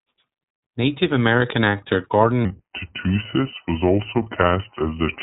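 From the start, the speech carries iLBC codec damage. Nothing above 4 kHz survives, so it sounds narrow and boxy. Each short frame is coded on its own, giving a rough, synthetic edge. The texture fits the 20 ms, 15.2 kbps mode.

At 2.45 s, a section at the wrong speed begins and runs to the end. Playback drops to 0.809 times normal. Pitch falls by about four semitones, and the speech turns deep and slow. A mismatched clock during editing or playback is the likely cause.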